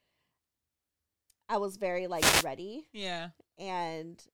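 A speech recording with a wireless microphone noise hit from 2.14 to 2.47 s: a brief swish of static rises over the voice as the analogue FM radio link fades and receiver noise fills the gap. Unlike a digital dropout, the sound isn't muted; hiss covers it.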